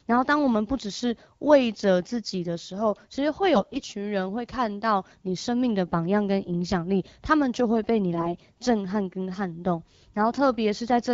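Around 3.55 to 3.81 s the speech turns hoarse and gargly, then again from 8.13 to 8.33 s, scratchier this time. These are AMR bit errors: the weakly protected bits arrive flipped, around a tenth of them and then a fifth, so the excitation pulses and finer gain and spectrum values come out wrong.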